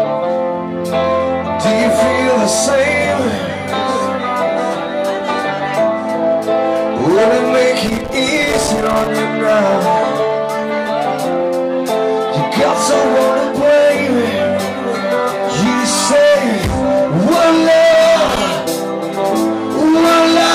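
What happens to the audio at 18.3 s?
At 18.3 s the audio breaks into loose connector crackle. It runs from 18.22 s to 18.41 s, roughly a fifth of a second. A worn or dirty contact in the signal path is making and breaking as it shifts. Each break chops the signal off for an instant, and any DC sitting on the line jumps with it. The result is a ragged, irregular burst of crackle and scratching.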